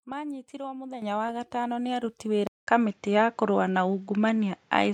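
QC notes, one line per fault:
1.02 s and 2.04 s, microphone volume stepped up: the call software judged the input too quiet and raised the device gain in single steps, about 8 dB just before "wa gatano nĩ", then about 4 dB just after it, so speech and background jump louder together.
2.47 s to end, input switched to a poorer device: the input likely moved to another microphone or a headset's call profile, leaving a 200 ms gap, then duller, narrower sound, a small level shift and a faint new noise floor.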